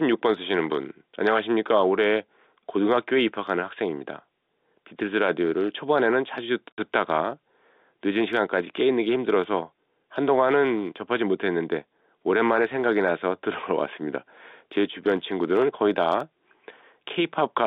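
At 6.75 s the speech drops out into a hole of dead silence lasting about 60 ms, with hard edges as the sound cuts off and snaps back. This is packet loss filled with silence: audio went missing in transit and the receiver inserted digital silence instead of concealing the gap. The 60 ms hole fits two consecutive 30 ms packets being lost. Throughout the clip, the speech has the narrow 250 Hz to 3.7 kHz telephone band of G.711 A-law coding.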